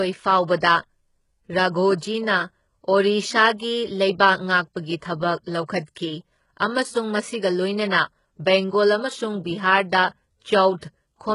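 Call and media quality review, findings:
HE-AAC compression, whole clip. Gritty, metallic, lispy s sounds. Likely HE-AAC encoder, heavy damage, fits a 12 kbps stream. Treble rebuilt from copied lower bands. Spectrogram: hard ceiling at 11.1 kHz, smeared repeated patches above crossover, misaligned harmonics.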